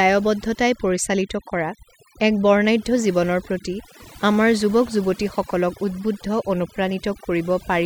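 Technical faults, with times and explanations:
Throughout: overdone noise removal. A noise reduction stage has been pushed too hard on a noisy speech recording. Each frequency band that sits close to the tool's noise estimate is cut deeply or muted outright. The gaps between phrases fall to near silence, dotted with brief twinkling specks where isolated bands flicker back on. Quieter parts of the speech fall under the same threshold and are stripped away along with the noise.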